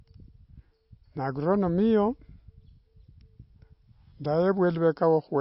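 MP3 compression damage runs from start to finish of this short speech clip and is plainly audible. Nothing is present above 5.6 kHz, so sibilants lose their edge and the sound is dull. Weak spectral detail drops in and out between frames, giving a watery, swirling texture to the sound. The likely cause is an MP3 encoder starved of bits, which fits a bitrate around 32 kbps, cutting the treble and discarding quiet components.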